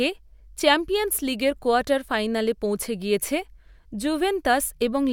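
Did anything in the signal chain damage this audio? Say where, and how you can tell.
No, nothing in the signal chain damaged this audio.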